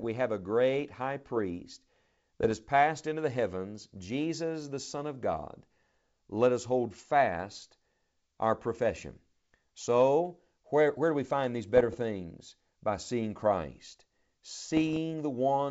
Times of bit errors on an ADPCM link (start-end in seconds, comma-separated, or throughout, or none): 2.40-2.52, 11.76-11.97, 14.68-14.99